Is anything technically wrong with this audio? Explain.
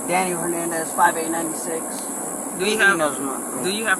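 Yes. At 1.99 s a single sharp snap cuts in on top of the sound, peaking at about -10 dBFS. This is an electrical switching spike, likely a nearby switch, motor or static discharge arcing briefly and coupling into the audio line.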